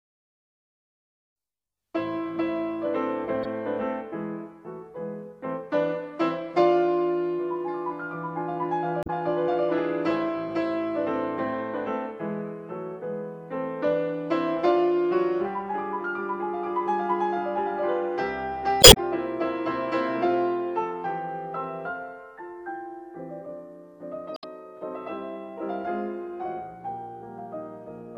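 Damaged data in a compressed stream shows up at 3.43 to 3.45 s, 9.03 to 9.10 s, 18.80 to 18.97 s and 24.34 to 24.44 s. Each time, corrupted bytes make the decoder misread frames and lose sync until it finds the next header. The result is a brief chirp, squawk, click or short hole in the audio.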